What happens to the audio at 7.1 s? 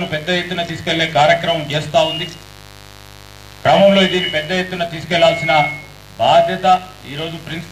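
At 7.1 s you're hearing the same mains buzz that runs through the whole clip: sharp switching spikes riding on the 50 Hz supply, twice per cycle, spraying harmonics up into the kilohertz range. It's a steady, raspy buzz sitting about 25 dB under the sound.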